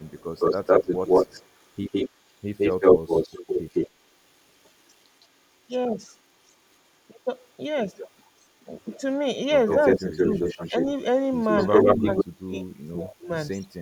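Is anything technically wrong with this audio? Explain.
Yes, there are two faults. From 0.0 to 12.24 s there is an echo leak. A far-end echo canceller likely let the loudspeaker's pickup through, so a copy trails the speech by 160 ms at nearly equal loudness. A much fainter copy returns at 13.51 to 13.68 s.

Speech suppressed in double talk occurs at 9.99 to 10.73 s and 11.97 to 13.3 s. When both sides talk at once, the canceller likely ducks the talker too. The first stretch dips by roughly 15 dB for about a tenth of a second, and the second drops deeply for about a second.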